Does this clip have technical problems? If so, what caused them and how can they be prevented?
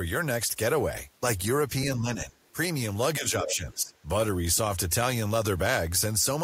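Yes. The speech dips from 1.95 to 2.36 s and again from 3.18 to 3.94 s, falling by around 10 dB and then around 15 dB. That's speech suppressed in double talk, likely an echo canceller ducking everything when both sides spoke at once. Better double-talk detection or a headset on this end would prevent it.

Between 3.44 and 3.56 s a brief scrap of a second voice slips in, roughly 10 dB under the talker. That's the other side's voice leaking through, likely loudspeaker echo the canceller didn't fully remove. Using headphones or lowering the speaker volume would stop it.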